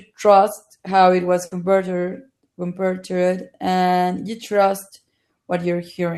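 At 1.45 s the speech breaks up in a burst of packet loss lasting until about 1.54 s. Several consecutive packets never arrived in time, so the receiver stretched the last received sound across about 60 ms, fading it down, and then jumped ahead, leaving about 60 ms of speech missing. It sounds like a brief smeared hold followed by a skip. A spectrogram shows frozen, repeating bands that decay before an abrupt restart, and the waveform shows a shrinking envelope followed by a discontinuity.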